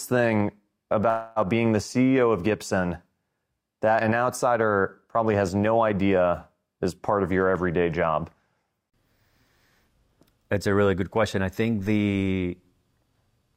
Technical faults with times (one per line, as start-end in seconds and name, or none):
1.09-1.39 call audio freeze